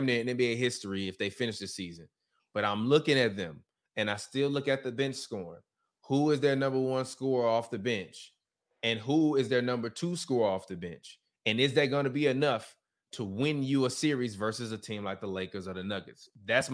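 No technical faults are audible.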